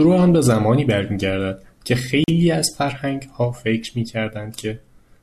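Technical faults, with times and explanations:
2.24–2.28 s, block of digital silence: a 40 ms run of samples drops straight to silence and then resumes, with no fade at either edge, so the speech breaks with a brief hole.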